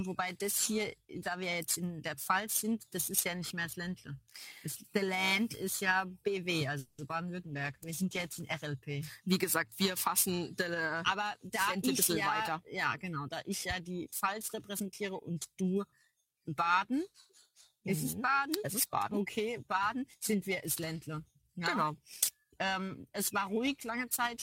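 Throughout the clip, periodic clock jitter is present. Interference is shaking the converter's sampling clock at a steady rate of around 3 kHz, so every component of the sound picks up sidebands spaced that far above and below it. The higher components are hit harder. The result is a constant rough, metallic edge that rides on top of everything heard and drops away whenever the audio falls silent.

At 6.79 s a call audio freeze begins and lasts until 7.00 s. The likely cause is packets held up in transit long enough that the jitter buffer ran dry. For about 190 ms the receiver keeps stretching the last sound it had into a fading buzz or hiss. Playback then resumes exactly where it stopped, so nothing is lost, but the clip now runs 190 ms later than before.

Almost immediately after, from 7.08 to 7.11 s, there is a short concealed packet loss. About 30 ms of the stream never arrived in time for the decoder. 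The receiver covered roughly 10 ms of that hole by extending the preceding sound and blending back into the real signal, and the other 20 ms or so simply drops out. It comes through as a brief smear or wobble, with a fleeting sound possibly swallowed.

From 7.45 to 8.71 s a call bitrate drop takes hold. The bandwidth estimate collapsed, and the encoder was pushed from 48 kbps down to 14 kbps, sitting at that floor for about 1.2 s. At that rate Opus codes everything far more coarsely and trims off the upper frequencies. The sound turns muffled and watery until the bits return.

Later there are two jitter buffer speed-ups. In each, the buffer held more audio than it wanted and shed the surplus by cutting out short pitch-period-sized slices over and over. The first, from 11.69 to 11.87 s, runs at 121% speed and removes about 50 ms, an abrupt, audibly hurried moment. The second stretches from 13.08 to 15.30 s at a gentler 105% and removes roughly 150 ms in total. 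The pitch stays put in both, but the pacing noticeably quickens.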